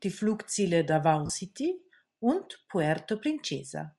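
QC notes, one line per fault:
throughout: Bluetooth LC3 compression. The speech has a plainly audible breathy, grainy edge, with the upper range sounding noise-filled rather than detailed. The likely cause is LC3 coding that zeroes upper spectral bands and fills them with noise, consistent with about 48 kbps and 7.5 ms frames.
1.26–1.30 s: lost LE Audio frames. For about 37.5 ms the speech is replaced by concealment sound. The decoder repeated the last spectrum with scrambled signs to cover the gap, which fits five missing 7.5 ms frames.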